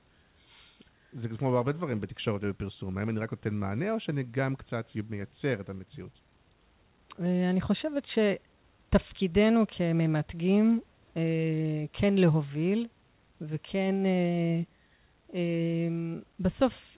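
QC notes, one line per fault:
No faults heard.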